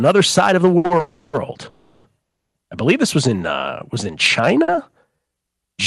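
Three short stalls from late packets, at 0.77 to 0.85 s and twice just after "side of the" (0.86 to 0.91 s and 0.97 to 1.00 s), hold the current sound for roughly 70, 40 and 20 ms while the jitter buffer waits, with nothing lost.

Three call audio freezes follow, at 1.00 to 1.34 s, 1.69 to 2.05 s (ending at "I believe this was") and 2.22 to 2.55 s. The likely cause is delayed packets draining the buffer. The first two are filled with a fading buzz or hiss. The third goes mostly silent for about 0.29 s.

From 3.30 to 5.36 s, a jitter buffer slow-down repeats pitch periods to rebuild its reserve. Delivery drops to about 94% speed, adding 139 ms. The sound is drawn out at unchanged pitch.

Inside that stretch, at 4.63 to 4.69 s, a further 50 ms short stall briefly holds the sound.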